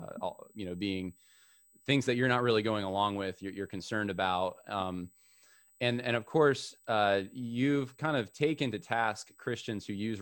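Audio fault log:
Throughout, USB whine: there's a thin, steady high whistle sitting under the speech the whole way, pitched at 8 kHz with its strongest part up at 16 kHz, roughly 35 dB below the talking. That fixed pitch points to the USB bus's 125-microsecond microframes: each burst of current draw leaks through power or ground into the audio path, so you get the 8 kHz repetition rate and its harmonic rather than anything in the room.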